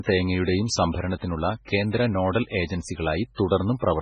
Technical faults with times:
0.00-4.02 MP3 compression
0.11-3.99 clock slip clicks
1.18-1.22 pre-echo
3.35-3.38 pre-echo

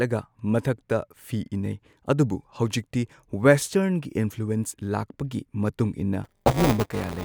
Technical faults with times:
6.24-7.24 buffer tearing

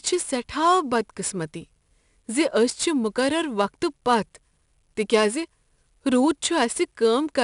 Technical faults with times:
0.00-7.44 4-bit ADPCM compression

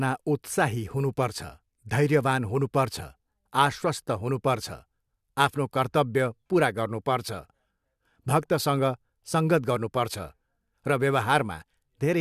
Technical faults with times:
none

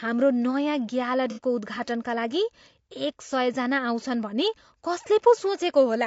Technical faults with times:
0.00-6.06 low-delay AAC compression
1.30-1.40 AAC frame loss with concealment

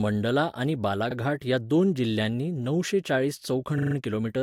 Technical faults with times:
1.10-1.14 repeated frames
3.77-3.94 repeated frames

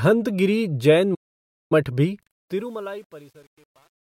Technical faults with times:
1.14-1.72 playback stall
2.21-4.11 truncation distortion on a fade

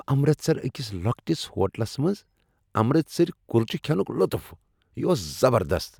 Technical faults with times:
none

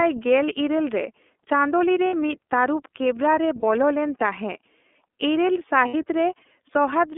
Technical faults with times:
0.00-7.18 iLBC codec
2.07-2.13 lost iLBC frames
3.59-3.64 lost iLBC frames
5.88-5.95 lost iLBC frames

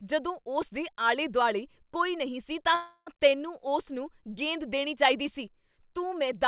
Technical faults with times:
2.75-3.10 call audio freeze

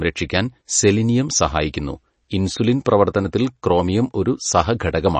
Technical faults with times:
0.00-5.20 MP3 compression
2.85 pre-echo

